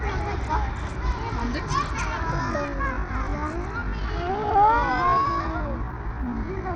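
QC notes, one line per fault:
throughout: Bluetooth SBC compression. The top octave is thin and unstable, with high-frequency detail dropping in and out, and a grainy, gritty noise sits on the whole signal along with aliasing. This is likely a low-bitpool SBC link, consistent with a rate around 80 kbps. The codec splits the band into a few wide sub-bands and assigns bits without a hearing model, so the weaker upper bands get starved or zeroed and the rest is coarsely quantised.
2.32 s to end: time-stretched section. From this point the pace drops abruptly to about 0.65 times the original speed while the pitch holds steady. The slowed material drags. The cause is likely pitch-preserving stretching, where short segments of the audio are repeated to lengthen the passage. The repeated fragments lengthen the material instead of shifting the pitch down.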